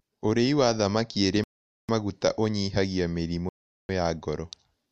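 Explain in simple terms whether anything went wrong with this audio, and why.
Twice the speech drops to dead silence and then carries on: from 1.44 to 1.89 s, and again from 3.49 to 3.89 s. That's likely a Bluetooth stall: interference delayed the wireless packets, the headphones ran out of buffered audio, and playback paused until the data caught up.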